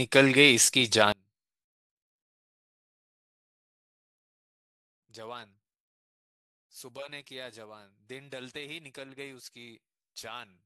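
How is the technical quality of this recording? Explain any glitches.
The quality is poor from 1.12 s onward. The speech drops by about 24 dB and stays faint to the end, likely from one channel inverted, cancelling shared content when summed to mono. The waveform collapses abruptly there, and the spectrogram dims across the band.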